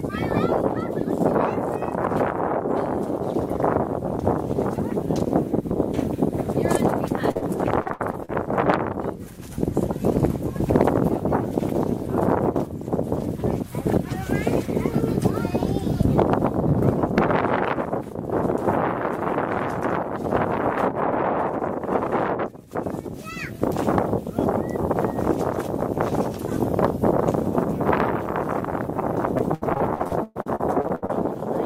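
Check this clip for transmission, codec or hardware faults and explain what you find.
Packet loss is present, both as isolated concealed drops and as sustained repeated loss.

Short concealed packet loss, 7.31 to 7.37 s and 7.37 to 7.44 s: two back-to-back brief smears where about 40 ms each went missing and the decoder extended the preceding sound to cover the hole.

Repeated packet loss (robotic sound), 7.82 to 8.30 s and 29.38 to 31.11 s: choppy sound with pieces missing as gap after gap is patched. There are five gaps in the first stretch and thirteen in the second, the longest about 0.12 s, so roughly a third of each stretch is synthetic fill.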